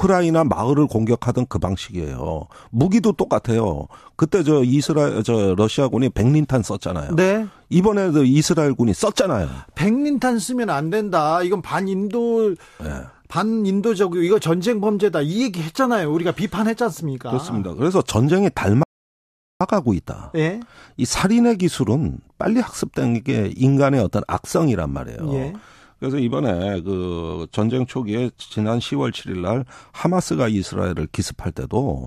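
The player's buffer ran dry at 18.83 s in this speech clip, a rebuffering stall: playback waits for more data, leaving about 0.77 s of silence until 19.61 s. The speech then resumes exactly where it stopped, so nothing is lost, only delayed.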